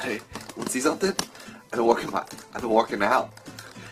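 An adaptive stream at a lower bitrate takes over at 0.83 s and runs to the end. The connection apparently slowed, so playback switched abruptly, with no gap, to a leaner encode. Codec artefacts rise, with coarse codec smearing, consistent with a drop from roughly 64 to 16 kbit/s Opus.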